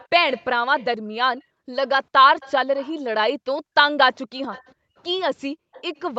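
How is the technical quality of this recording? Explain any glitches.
The recording has two recurring call-path problems: a faint delayed repeat of the speech and brief dips in the room background.

Echo leak, at 0.0–0.85, 1.88–2.93, 4.15–4.72 and 5.73–6.01 s: a copy of the speech trails about 0.40 s behind, roughly 25 dB down (about 30 dB in the last one). This is likely loudspeaker sound that slipped past the far end's canceller. The fixed lag sets it apart from room reverb.

Background gated by the echo canceller, within 0.16–1.69, 3.03–3.75 and 4.75–5.95 s: the room tone drops by up to about 40 dB for half a second or less while the loudspeaker plays, then returns. It tracks the far-end playback rather than random packet loss.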